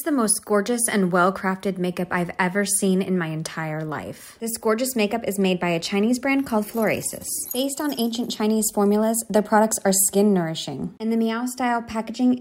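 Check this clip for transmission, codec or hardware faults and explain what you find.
Nothing audible points to a transmission, codec or hardware fault anywhere in the clip.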